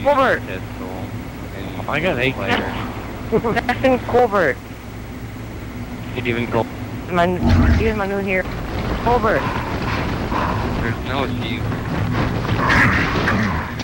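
Nothing stood out on listening; no technical faults could be heard at any point.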